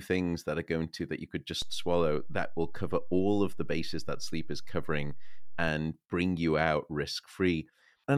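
A DC step at 1.62 s offsets the zero line by about -31 dBFS until 5.68 s; each edge gives a low thump, not a gap in the speech.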